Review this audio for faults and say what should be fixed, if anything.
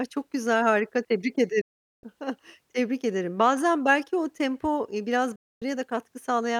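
Digital broadcast dropout at 1.61–2.04 s and 5.36–5.62 s. The receiver muted on lost frames with a 3 ms fade to true silence, unlike concealment, which fills gaps. Stronger reception or more error protection would prevent it.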